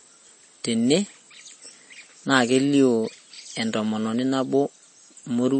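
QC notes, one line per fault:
Throughout, MP3 compression, likely: the speech has nothing above 8.4 kHz and a plainly audible watery, swirling texture, with sibilants turning metallic and chirpy. The encoder ran short of bits, so it cut the treble at a fixed point and let weak frequency lines flicker on and off between frames, which fits a bitrate near 32 kbps. A simple low-pass filter would lose the same treble but leave no swirl or chirping.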